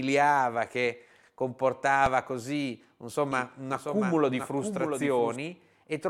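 At 2.06 s the speech briefly freezes in an underrun with held sample. For 2.67 ms, which fits a 128-sample buffer, the waveform sits flat at its last value. No audio is lost and playback resumes where it stopped, so the seam passes with only a soft joint rather than a click.

From 3.32 s to 5.36 s a doubled audio track appears: a full-band copy of the speech trails the original by roughly 0.7 s, about 5 dB quieter. It is likely a second capture through a slower path. Unlike a room echo, the copy carries no decay or reverberant colour, and it starts and stops abruptly.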